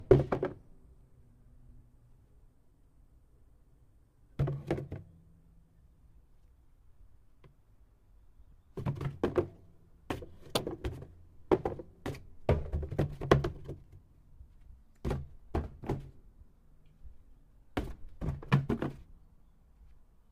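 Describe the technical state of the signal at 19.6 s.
At 19.6 s the audio is intact, with no audible technical fault.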